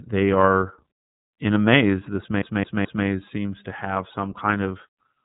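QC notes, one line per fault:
Throughout, iLBC codec: the speech sounds plainly roughened and slightly synthetic, like a phone call with a grainy edge. Nothing gets through above about 3.8 kHz, so the top end is gone and consonants lose their crispness. Each 30 ms frame has its excitation coded from scratch with no help from the one before. The damage level fits the 13.33 kbps mode.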